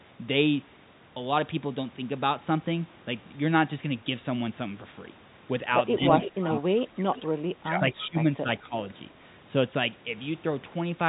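From 5.97 to 6.15 s the speech dips by about 10 dB, the first sign of speech suppressed in double talk. The likely cause is the echo canceller mistaking overlapping talk for loudspeaker echo and attenuating everything. The same pumping returns more heavily from 6.32 to 7.43 s, with drops of about 25 dB, then from 7.6 to 8.16 s at about 20 dB and from 8.41 to 8.74 s at about 10 dB.

Interleaved with this is an echo leak: a copy of the speech arriving 214 ms late, heard from 6.21 to 6.6 s at about 10 dB below the direct signal, then as brief scraps at 7.17 to 7.22 s and 8.02 to 8.06 s, each about 20 dB down. The constant delay points to residual loudspeaker pickup passing through an echo canceller that did not fully converge. The echo sits within the same telephone band as the direct speech, with nothing above 3.8 kHz.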